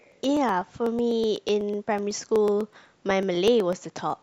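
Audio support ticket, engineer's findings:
Periodic USB or driver dropouts. Something blocks the USB bus or audio driver every 0.124 s, about eight times a second, from 0.12 s to 4.10 s, around thirty events. Each time, roughly half a millisecond of speech is skipped, not silenced, leaving a short splice. The result is a regular ticking through the speech, heard only while there is signal.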